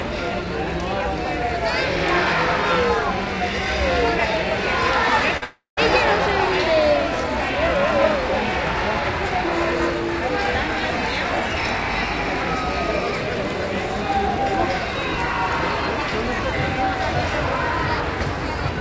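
Short concealed packet loss comes first, at 5.37 to 5.44 s. About 40 ms of audio failed to reach the decoder in time. The receiver covered the gap by extending the sound that came just before it and then cross-fading toward what came next. In this clip the patch lasts only a few hundredths of a second and is heard as a quick smear or wobble in the sound, right at the point where the larger break begins.

A long network dropout follows at once, from 5.44 to 5.79 s. This is likely a stall in which no packets arrived for roughly a third of a second. The concealment keeps the last sound going as a fading buzz or hiss, then gives out, leaving about 150 ms of silence. The sound resumes at 5.79 s with the lost portion simply gone. The fill and the recovery carry the dulled top end of the call codec, with nothing above 8 kHz, which fits G.722.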